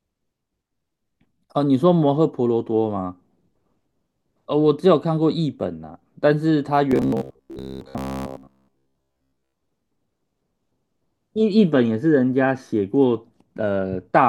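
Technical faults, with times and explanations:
6.91 to 9.54 s, robotic sound from repeated short buffers: the speech turns into a stiff, metallic buzz pinned at about 66.8 Hz, still loosely tracking the syllables. This is likely starved playback, with fresh audio arriving too rarely and the gaps filled by looping the most recent short slice, a cycle near 15 ms, while the real audio in between is dropped; roughly seven tenths of this stretch is such repeated material.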